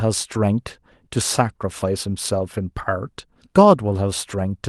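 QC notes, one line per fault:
0.73 s and 1.81–1.83 s, lost packet rebuilt from error correction: each 20 ms packet was replaced by the next packet's low-bitrate copy, so there's no gap, just a brief rougher, noisier patch.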